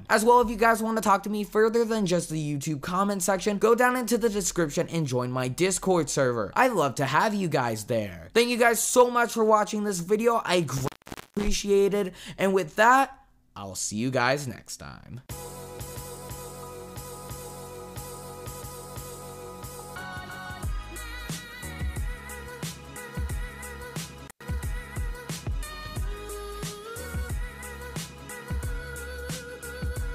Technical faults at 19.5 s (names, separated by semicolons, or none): none